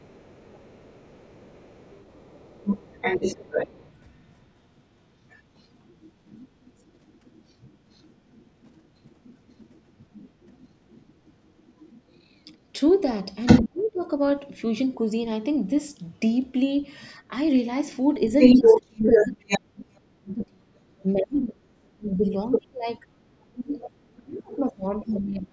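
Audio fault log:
0.0–14.9 s and 15.96–25.14 s: other side's voice leaking through. A second voice sits far below the talker at first, then slightly louder than the talker after 15.96 s, likely loudspeaker echo left uncancelled. On a spectrogram it shows as a second, overlapping set of harmonic stripes.
2.9–2.95 s, 13.64–14.02 s, 18.54–25.53 s: speech suppressed in double talk. The talker is pulled down while the other side speaks. First comes a brief, modest dip, then a deep cut of a few tenths of a second. Over the last stretch there is about five seconds of deep, broken cuts, likely from the echo canceller muting both voices at once. The waveform envelope collapses in chunks, and the spectrogram fades or goes blank there.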